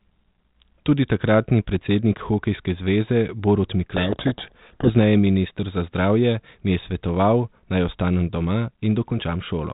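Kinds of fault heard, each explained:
Codec payload misread: from 3.96 to 4.91 s, just before "minister za", the decoder reads the bits of each G.726 code word in the wrong order, so every sample gets a wrong adaptive difference and the speech is buried in harsh, rasping distortion. On a spectrogram that stretch becomes dense broadband noise up to the 4 kHz ceiling of the light 32 kbit/s telephone coding, and the waveform turns jagged and noise-like until normal decoding resumes.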